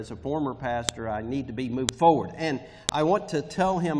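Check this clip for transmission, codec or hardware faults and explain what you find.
A file header was played as audio: the stream appears to be built from separate WAV pieces about 1.0 s long, joined without stripping each piece's header. At 0.89 s, 1.89 s and 2.89 s, those few dozen header bytes are read as if they were samples, so the player outputs a brief burst of arbitrary values. Each one is heard as a sharp, loud click or snap at the start of a new piece, regardless of what the sound is doing at that moment.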